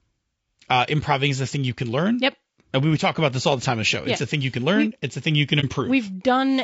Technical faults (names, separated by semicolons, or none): low-delay AAC compression; AAC frame loss with muting